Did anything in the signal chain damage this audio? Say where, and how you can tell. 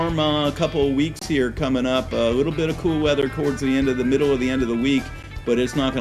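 Yes. Brief silences break the sound at 1.19–1.22 s, 3.22 s and 5.23 s, two seconds apart: codec-stage gaps at joins of encoded pieces, left by untrimmed encoder padding.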